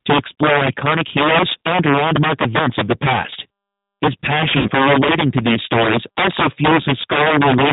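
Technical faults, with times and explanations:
throughout: integer overflow. Loud peaks crack violently instead of flattening. The signal is driven about 8 dB past full scale, so a small share of samples overshoots. Each one wraps to the opposite extreme, making harsher snaps than ordinary clipping.
throughout: G.729 codec. The speech sounds band-limited, rough and slightly synthetic, and the coding damage is plainly audible. The codec rebuilds each 10 ms frame from a vocal tract filter, pitch predictor and a few pulses. This fits 8 kbit/s G.729A.
4.57 to 4.71 s: VoIP packet loss concealed by the speech codec. About 80 ms of audio is missing, which fits roughly four lost packets. The decoder repeats its last pitch and filter with falling gain, giving a fading smear just before "relating to these stories".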